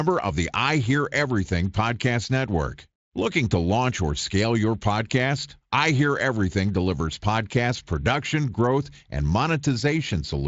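No faults can be heard in this speech recording; it passes through a Speex codec path that is working as intended, with light coding texture and a band that stops near 7.6 kHz, consistent with a mid-to-high Speex setting.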